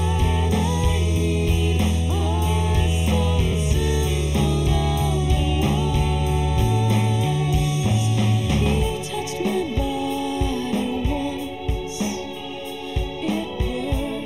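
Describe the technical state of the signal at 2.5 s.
Hollow and phasey, with a tube-like colour, and this holds not just at 2.5 s but from start to finish. The cause is channel delay (comb filtering): one channel trails the other by roughly a third of a millisecond, and when the two are summed to mono, the shared content cancels at evenly spaced frequencies. The first deep notch sits around 1.5 kHz, with further notches repeating above it, carving fixed gaps into the spectrum.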